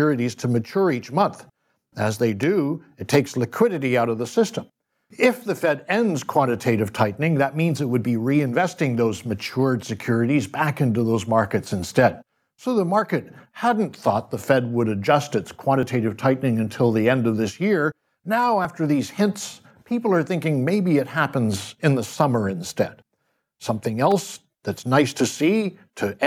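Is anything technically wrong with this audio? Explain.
Yes. The speech has two kinds of fault, five events in all.

Electrical switching spikes occur at 2.43 s and at 24.11 s. Each is a sharp snap or a tight cluster of clicks laid on top of the speech. The likely cause is a nearby switch, motor or static discharge arcing briefly, with the audio line picking up the burst.

Dropped buffers (overruns) occur at 15.83 s, between "would adjust its" and "tightening until the end"; at 18.65 s, just before "these hints people are"; and at 24.39 s, just before "that's nice". Each is heard as the speech jumping forward with no gap of silence. The likely cause is the software failing to read samples before the hardware overwrote them, so the two sides of the missing stretch are joined directly. The losses are short, around 10 ms at the first and last points and around 30 ms at 18.65 s.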